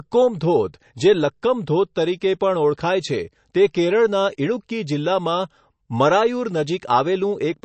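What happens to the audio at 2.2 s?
At 2.21 s a brief pre-echo precedes an attack. The codec spreads noise across its block, so a short hiss leaks in before the onset and softens it. Throughout, the sound is watery and smeared, with nothing above 8.3 kHz. That is likely heavy MP3 compression, and it fits a bitrate near 37 kbps.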